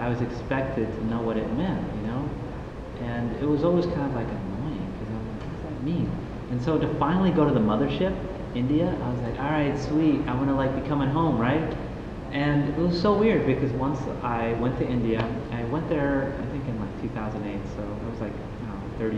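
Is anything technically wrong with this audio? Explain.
No, nothing in this audio points to a technical fault in how the signal was captured, processed or delivered.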